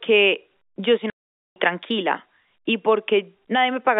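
Speech over a telephone line, band-limited to roughly 250 Hz to 3.6 kHz. There is packet loss filled with silence from 1.1 to 1.56 s, between "yo soy" and "tranquila y". The 460 ms hole has hard edges, which fits twenty-three lost 20 ms packets.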